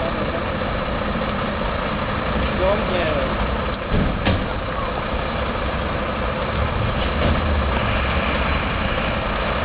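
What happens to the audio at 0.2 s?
Nothing goes wrong at 0.2 s; the audio plays through that moment intact, with no dropout, click or distortion.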